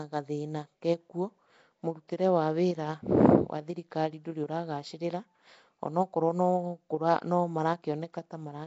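From start to finish, the speech carries a rough, hissy halo and a smeared, underwater quality. Nothing is heard above about 7.7 kHz. The cause is likely Nellymoser compression, the old Flash microphone codec. It codes short blocks at a fixed, low bit budget. Quiet bands get no bits at all and are filled with noise instead. That noise is the hiss. The blocky coding smears the sound. The damage is plainly audible and fits a rate near 32 kbps.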